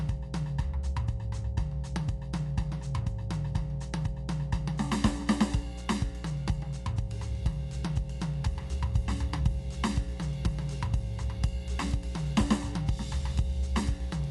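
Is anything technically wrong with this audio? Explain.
Yes, two faults run through the whole music clip.

Mains hum: a ground loop or nearby transformer leaks the 60 Hz power line into the signal, leaving a steady low drone only about 5 dB below the music.

Dolby Digital compression is the likely cause of the dull, band-limited sound: with nothing above 11.4 kHz and a rough, fluttering noise around tones, it fits a low bitrate near 64 kbps.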